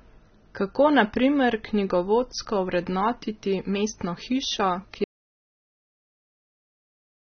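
From the start, the speech sounds dull and smeared, with a fizzy, warbling edge and nothing at all above 6.3 kHz. That's most likely AAC compression, and the damage fits AAC-LC at a low bitrate, around 20 kbps, where the encoder drops the top end and thins the spectrum.

At 5.04 s the audio cuts out to dead silence, with no room tone, and stays that way to the end. That's an audio dropout to silence, likely a lost input while the recorder kept writing silence.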